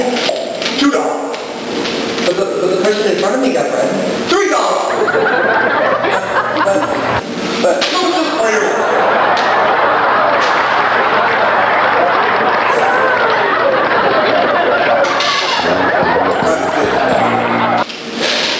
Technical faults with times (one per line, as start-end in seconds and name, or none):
0.00-18.59 gain pumping